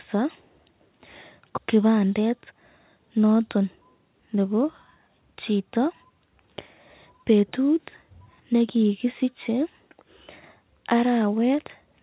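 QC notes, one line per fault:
1.58 s, skip ahead: Playback jumps forward with no gap fill, dropping roughly 0.7 s of speech. The two sides of the cut are joined almost directly, so the sound lurches ahead. This fits buffered audio being discarded when the jitter buffer overflowed, pulling delay down by about the same amount.
3.56 to 4.37 s, jitter buffer speed-up: Speech runs at about 114% speed with pitch unchanged, sounding hurried over this stretch. The receiver trimmed short pitch-period slices in succession, removing roughly 100 ms in total to shrink an overfilled buffer. All of this sits within a G.711 mu-law band that stops at 4 kHz.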